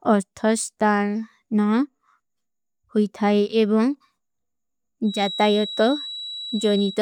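From 5.02 s on, a feedback whistle holds at 3.9 kHz, well under the speech, likely from a speaker-mic loop poised at feedback. Unlike a howl, it swells and fades slowly but never builds up.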